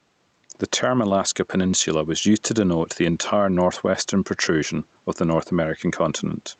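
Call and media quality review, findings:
Call and media quality review, findings:

Gain pumping, entire clip. Gain swinging by around 5 dB. Level contrast flattened, speech squashed. Likely cause: capture gain set too high, fast input limiter/compressor clamping peaks and releasing in gaps. Room noise sits about 44 dB below speech. The top end stops at 8 kHz, consistent with Opus near 32 kbps.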